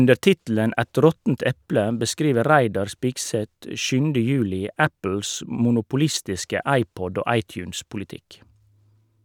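No technical faults can be heard anywhere in this recording. The speech is intact, with nothing in the audio that points to a problem in the chain that carried it.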